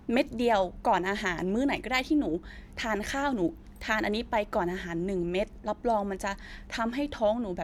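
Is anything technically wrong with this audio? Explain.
No, nothing technical stands out here, and the speech comes through just as you'd hope.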